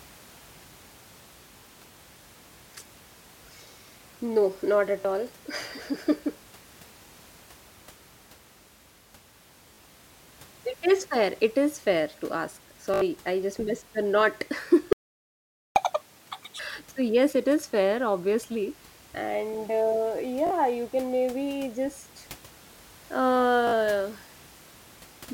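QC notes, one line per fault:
5.01–5.05, 9.74–9.78, 12.94–13.01, 20.47–20.51 and 23.67–23.73 s: Bluetooth stutter. Audio data arrived late or not at all. The receiver replayed its last short slice to fill the gap. Each event is a brief buzzing repeat. The gaps are about 37 ms at 5.01, 9.74 and 20.47 s, about 56 ms at 23.67 s, and about 75 ms at 12.94 s. The longest repeats the most. The event at 20.47 s falls just before "you can maybe just". After each one the sound picks up further on, as if it had kept playing.
14.93–15.76 s: playback stall. Right after "just missed the not", the sound stops in mid-flow for 0.83 s of silence. The likely cause is the player running out of buffered data or its thread being blocked. Output cuts out until the data flow recovers, then resumes. The gap is long enough to hear clearly as a dropout, and the quiet room noise disappears with it.
15.76–16.59 s: catch-up at higher speed. 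After the stall, the player works through its backlog by resampling at double speed. For 0.83 s the sound runs twice as fast and rises by roughly ten semitones, close to an octave. This gives it a sped-up, chipmunk-like quality. The rush makes up the time lost in the stall, and then speed and pitch drop back to normal.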